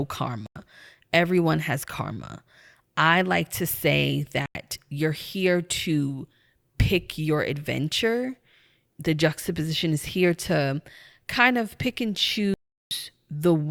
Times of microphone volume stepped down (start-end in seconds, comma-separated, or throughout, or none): none